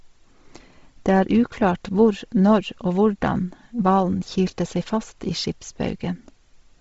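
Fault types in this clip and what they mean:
Bluetooth LC3 compression: The speech was likely carried over a Bluetooth LE Audio link, whose LC3 codec, working at a rate that fits about 24 kbps with short 7.5 ms frames, discards much of the upper spectrum and substitutes noise. The result is heavy damage throughout: nothing remains above 7.7 kHz, and the speech carries a breathy, grainy edge where synthetic noise stands in for the detail that was stripped away.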